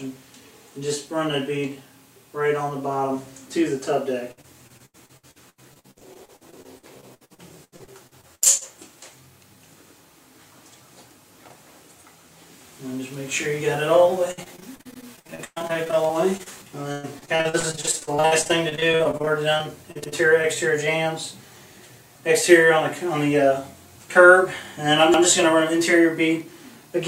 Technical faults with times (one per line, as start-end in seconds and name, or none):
4.31-8.63 repeated packet loss (robotic sound)
14.31-16.48 repeated packet loss (robotic sound)
14.94-15.04 overlapping chunks
16.92-20.45 repeated packet loss (robotic sound)
20.04-20.14 overlapping chunks
25.14-25.24 overlapping chunks